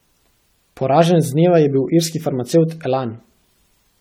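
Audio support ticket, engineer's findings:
Generation loss, throughout the speech. Swirly, hollow, smeared tone. Consonant onsets blurred. Sounds worse than one 64 kbit/s AAC-LC pass would. Likely cause: about seven decode-encode cycles. Each pass re-quantises on a shifted frame grid. Noise and spectral holes compound.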